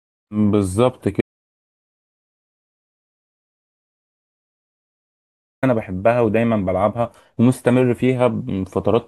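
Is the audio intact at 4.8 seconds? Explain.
No. At 4.8 seconds the clip is inside an audio dropout to silence lasting from 1.21 to 5.63 s. The speech cuts off mid-flow into silence with no room tone, unlike a natural pause. The input was likely lost while writing continued.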